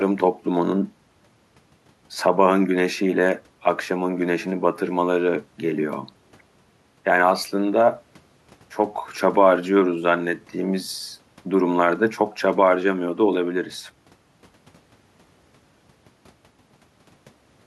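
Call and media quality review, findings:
Nothing stood out on listening to this speech recording.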